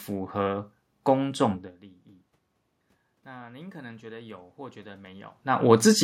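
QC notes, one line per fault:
3.25–5.83 s, automatic gain rising: voice and room noise swell together gradually over about 2.6 s as the gain control, finding the input too quiet after a drop of about 21 dB, raises its gain by about 6 dB, recovering only part of the lost level.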